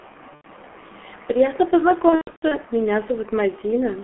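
The whole clip runs through what sounds like the G.723.1 codec, with heavy damage: speech squeezed into a telephone band of roughly 250 Hz to 3.4 kHz, muffled and a bit hoarse, with smeared consonants. That coarse, slow-moving voice model fits a rate around 6.3 kbit/s, where the codec only refreshes its picture of the voice every 30 ms frame or so.

From 0.35 to 0.47 s there's VoIP packet loss concealed by the speech codec, about 90 ms of missing audio. The decoder keeps extrapolating from the last pitch and filter it had, so the sound stretches into a buzzy tone or coloured noise that fades. The bigger hit comes from 2.09 to 2.58 s, where about 300 ms goes missing in gaps scattered over roughly 420 ms, the longest run near 120 ms. The speech keeps dropping into coloured, decaying buzz and stays weak or distorted for a moment after each recovery, because every rebuilt frame leans on the broken one before it.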